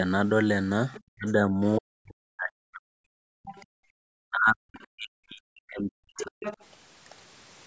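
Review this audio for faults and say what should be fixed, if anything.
Other side's voice leaking through: the echo canceller likely left part of the loudspeaker signal in the microphone path. A second, fainter voice surfaces briefly at 0.94 to 1.0 s, 3.43 to 3.66 s, 6.18 to 6.22 s and 6.4 to 6.65 s. It starts around 25 dB below the talker and grows steadily stronger, to roughly 10 dB below by the last scrap. Preventing it means giving the canceller a longer filter or slower adaptation so its echo estimate stays converged, plus stronger residual-echo suppression.

Speech suppressed in double talk: when both ends spoke at once, the canceller likely could not tell the near talker from the echo and attenuated everything. The talker's voice sinks by around 40 dB, so whole stretches nearly vanish at 1.12 to 1.61 s, 1.79 to 3.18 s and 4.24 to 6.38 s, the last lasting about two seconds. A more reliable double-talk detector that holds adaptation and eases suppression while the near talker is active would prevent it.

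Background gated by the echo canceller: right after the leak ending at 3.66 s, the canceller clamped the microphone while the loudspeaker played. The room tone drops by about 33 dB from 3.66 to 3.96 s, a hole of roughly 0.3 s, then comes back when the canceller releases. Filling that gap with matched comfort noise, or gating more gently, would prevent it.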